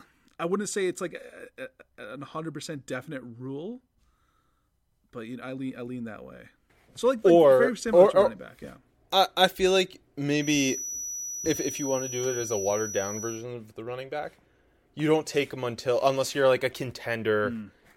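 A speech recording with a thin, slowly swelling and fading whistle at 5.9 kHz, about 10 dB under the voice, from 10.35 to 13.47 s, between "I I feel like" and "of the running back". It is a feedback whistle, likely a loudspeaker-to-microphone loop held just short of howling.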